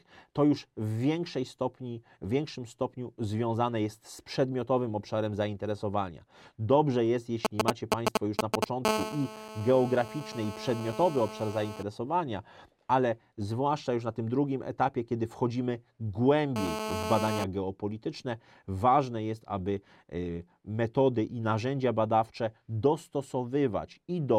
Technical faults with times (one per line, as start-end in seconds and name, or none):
7.45-8.64 GSM signalling bursts
8.85-11.83 GSM phone buzz
16.56-17.44 GSM phone buzz